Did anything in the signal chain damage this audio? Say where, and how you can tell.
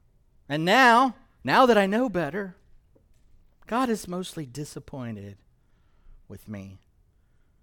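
No, nothing damaged this audio.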